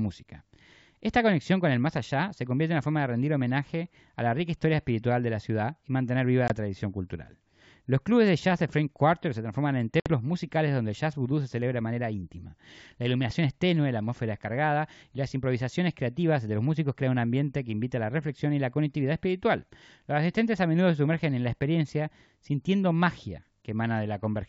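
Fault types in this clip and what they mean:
Packet loss on an ADPCM call: The speech drops into hard-edged silent gaps, a short one of about 20 ms at 6.48 s and a longer one of about 60 ms near 10.0 s, and in each case resumes slightly distorted before settling. The gap lengths fit one and then roughly three lost packets on the wideband G.722 link. Because the decoder's adaptive predictor and step size drift out of step during each gap, it takes some tens of milliseconds to resynchronise.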